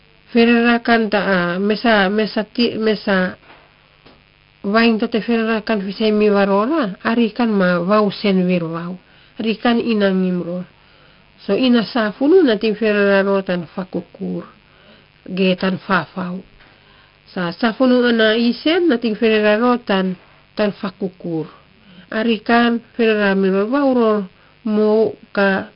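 A mains buzz at 50 Hz runs through the whole clip. Switching spikes add a raspy harmonic series, steady and well below the speech.

The speech also carries heavy 4-bit ADPCM compression, consistent with roughly 44 kbps. Gritty hiss follows loud syllables, attacks distort, and nothing remains above 5.3 kHz.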